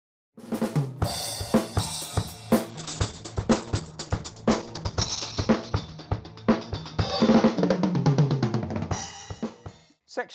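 A call bitrate drop begins at 2.7 s and lasts to the end of the audio. The connection's bandwidth estimate fell, so the encoder was forced to spend far fewer bits, the sound suggesting a fall from around 32 kbps to roughly 9 kbps. Coarser coding makes the audio rough and watery, and the top end is cut off at 8 kHz, leaving it muffled. The worst stretch lasts about 2.8 s before any easing.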